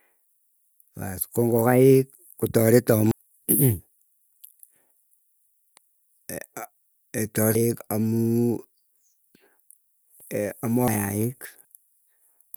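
The speech jumps ahead at 3.11 s, 7.55 s, 10.88 s and 11.65 s, skipping about 300, 400, 400 and 300 ms. These are compressed frames skipped: whole chunks of the encoded stream were missing or rejected by the decoder. The jump sizes suggest runs of three to five frames of about 85 ms each.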